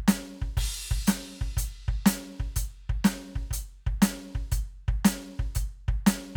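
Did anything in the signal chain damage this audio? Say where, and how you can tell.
No, nothing in this music stood out on listening as damage from any stage of the signal chain.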